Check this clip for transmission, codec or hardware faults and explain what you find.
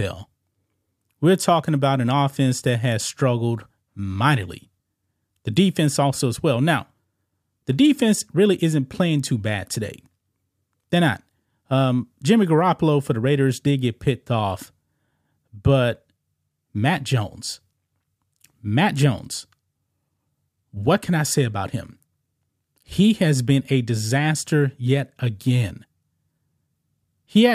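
Checking the clip turns up no faults to explain.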